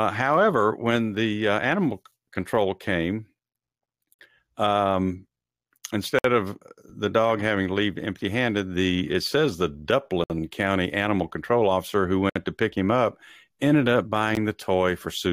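At 2.12 s (after "when the uh animal"), 4.14–4.19, 6.19–6.24, 10.24–10.30 (after "the it says the"), 12.30–12.36 and 14.35 s (after "him up ended up"), gaps between stream segments roughly every 2 s drop hard-edged silences of about 7 to 61 ms into the speech. Each shows as a flat-line break in the waveform and an empty vertical stripe on the spectrogram.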